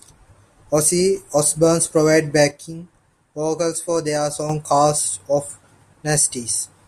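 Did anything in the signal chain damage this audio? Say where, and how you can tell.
Yes, there is a sudden gain jump. At 2.51 s the speech and the background noise drop together by about 7 dB in a single step, and at 4.50 s both return just as abruptly to the earlier level. Because the noise floor moves in lockstep with the speech, this is not the talker changing level. The likely cause is a digital gain setting applied without a ramp in the processing or driver stage, then later reverted.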